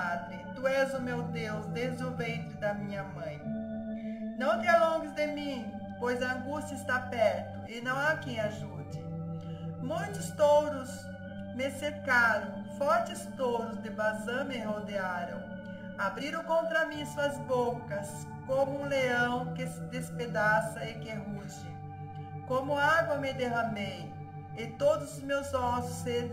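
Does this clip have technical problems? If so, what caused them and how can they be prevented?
Yes. Channel delay (comb filtering) runs throughout. One channel lags by roughly 1.5 ms before mono summing, which cuts notches from about 400 Hz upward and makes the sound hollow. Keep channels time-aligned before any mono fold-down.

Damaged data in a compressed stream causes brief glitches at 11.85–11.91 s, 16.16–16.22 s and 24.52–24.57 s. The decoder misread corrupted frames and resynced. Verify file and stream integrity with checksums during transfer and storage.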